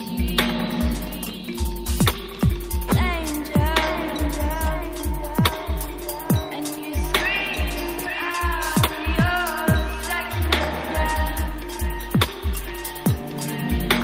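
Nothing stood out as a technical fault on listening to this recording.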